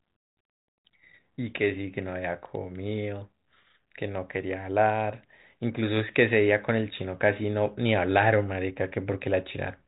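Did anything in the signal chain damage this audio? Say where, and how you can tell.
No, nothing in the chain audibly damaged this speech.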